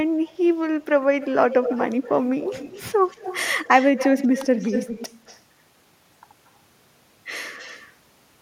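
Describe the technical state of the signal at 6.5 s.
At 6.5 s the speech signal is intact, with no audible technical fault at that moment.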